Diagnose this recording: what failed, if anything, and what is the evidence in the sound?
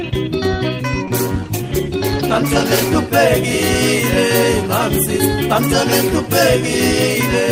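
A call bitrate drop at the codec stage from 1.06 to 3.03 s: the sound turns coarse and muffled, consistent with a fall from about 48 to 15 kbps. Unlike packet loss, it degrades smoothly, without gaps.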